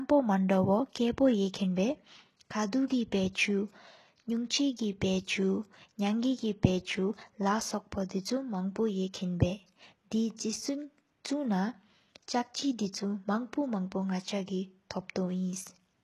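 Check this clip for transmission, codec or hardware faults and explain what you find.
One codec fault runs through the whole recording. HE-AAC compression, from start to finish, is the likely cause. Only the lower spectrum seems properly coded; the treble is rebuilt by copying lower bands upward under a coarse envelope, which fits a low bitrate around 16 kbps. The top sounds synthetic: sibilants sound gritty and lispy, the copied harmonics don't align above the crossover, and nothing remains above 12.3 kHz.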